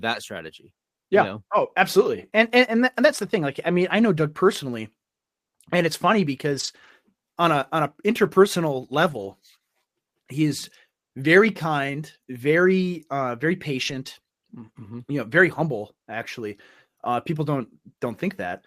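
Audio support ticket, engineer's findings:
Lost packets rebuilt from error correction, three spots in the speech: 6.51–6.89 s, 9.09–9.31 s, 13.87–13.93 s. No gaps; those stretches turn briefly rougher and noisier. Component: receive path, Opus decoder. The lost audio was replaced by low-bitrate copies carried in the following packets (in-band FEC), about 200, 120 and 40 ms of it, which fits runs of roughly ten, six and two 20 ms packets.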